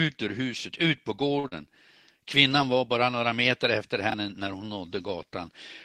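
At 1.39 s a short stall from a late packet begins, lasting to 1.47 s. A packet missed its slot and the jitter buffer ran dry. The decoder held the last sound for about 42 ms, then resumed where it left off. Nothing is lost. The speech stretches briefly, with a faint buzz or dip, and everything after runs 42 ms later.

Right after, from 1.48 to 1.54 s, there is a short concealed packet loss. About 40 ms of speech never arrived in time. The receiver bridged the gap by extending the preceding sound for about 37 ms, then blended back in. It comes across as a quick smear or wobble, and a brief sound may drop out.

From 4.10 to 4.14 s, chunks play out of order. One 20 ms chunk arrived a chunk late and plays after the one meant to follow it. No audio is lost, but the sequence is scrambled. Hard joins at the seams give a jumbled moment.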